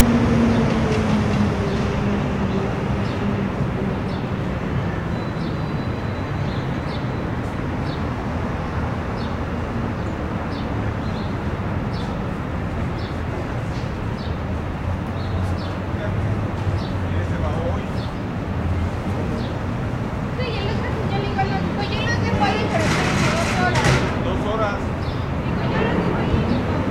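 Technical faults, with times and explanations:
0.00 s, file tags played as audio: a very short, loud rasp with hard edges opens the clip, lasting only a few milliseconds before the sound proper begins. A block of text tag data at the head of the file has been decoded as if it were sample values. Character bytes cluster within a narrow range, so the resulting waveform sits offset to one side of zero and sounds as a harsh, buzzy static burst rather than clean noise.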